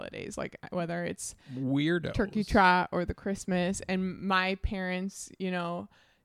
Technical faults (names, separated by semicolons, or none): none